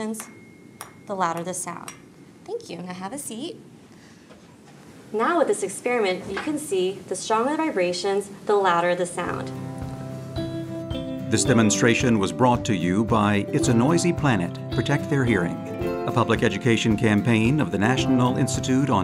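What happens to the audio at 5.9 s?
A single sharp click lands at 5.88 s, a thin vertical line through the spectrum with nothing audibly missing. The likely cause is dropped samples: a handful of samples, well under a millisecond, vanish from the stream, so the waveform jumps abruptly to a later value.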